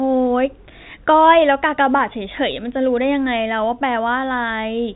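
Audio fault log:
No faults heard.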